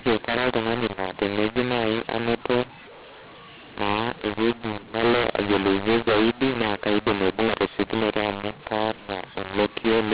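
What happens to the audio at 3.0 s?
At 3.0 s the mu-law and A-law mix-up is present, running the whole clip: A-law samples decoded as mu-law scramble levels, giving harsh speech, and noise fills pauses, unlike ordinary clipping.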